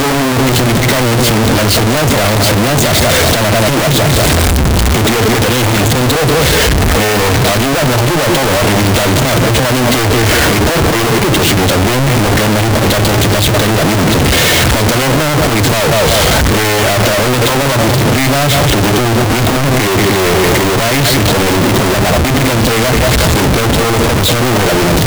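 The 16-bit samples appear to be read with the wrong sign convention from start to finish, a likely case of signed and unsigned mixed up. With the top bit of every sample flipped, each pass through zero turns into a jump across the entire amplitude range. The result is a constant, very loud, harsh distortion over the whole recording, and quiet stretches come through as loud as everything else rather than dropping away.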